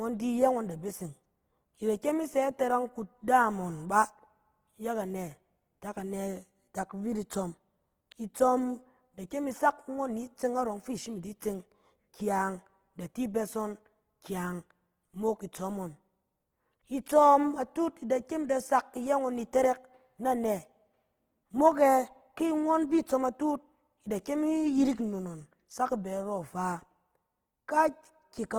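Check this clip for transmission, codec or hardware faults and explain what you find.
There's one fault, and it runs through the whole clip: Opus compression damage that's plainly audible from start to finish. The speech sounds grainy and rough rather than swirly. That's because the likely cause is Opus in its music-style CELT mode. It holds on to the energy in each band, but at this kind of starved rate it patches the detail in with folded copies of lower bands and noise. The audio stays fullband up to about 20.2 kHz, so it doesn't sound muffled, and the roughness fits a bitrate somewhere around 16 kbps.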